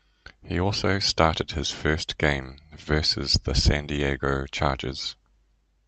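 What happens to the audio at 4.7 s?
Nothing goes wrong at 4.7 s: the speech passes through intact there, carried by the call path's Opus coding without any dropout, glitch or distortion.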